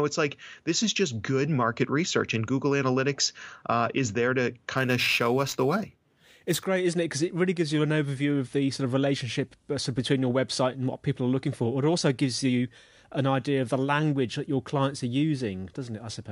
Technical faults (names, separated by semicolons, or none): imaging from sample-and-hold upsampling